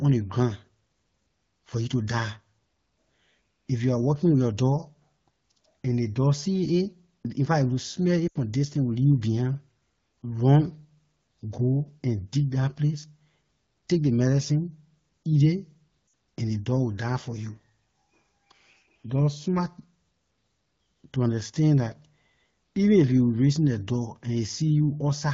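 Speech carried over an AMR wideband (HD Voice) link, with the codec itself adding only light coloration, has two bursts of lost AMR speech frames. At 8.28 to 8.38 s, just before "distance it will", and at 16.07 to 16.13 s, just before "and ley dog", the decoder fills gaps of about 80 ms and 60 ms (roughly four and three 20 ms frames) by repeating the last good pitch and vocal tract settings at falling gain, so the sound sags to near silence within two frames. A spectrogram shows frozen, fading harmonic bands, and the waveform a tapering envelope before speech resumes.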